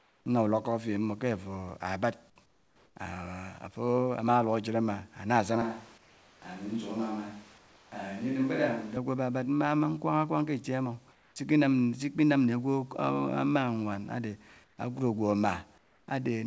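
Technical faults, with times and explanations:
0.0–0.26 s, 2.46–2.96 s, 5.98–6.42 s, 7.58–7.92 s, 11.12–11.36 s (right before "s'iki nam"), 14.64–14.78 s and 15.78–16.08 s: comfort noise in place of the background. Pauses go flat and featureless, about 4–5 dB quieter, likely because the sender stopped transmitting in silence and the receiver filled the gap with synthetic noise.
5.62–8.96 s: switch to a distant microphone. The speech suddenly turns roomy and hollow, with thinner bass, drops about 5 dB, and picks up much more room noise. That is likely because the close mic's feed dropped out and a farther one took over until the switch back. The call path's 8 kHz top end stays the same across the change.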